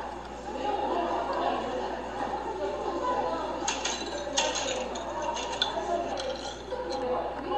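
The clip is a recording of sounds, and nothing technically wrong can be heard in it. The audio runs without any fault at any point.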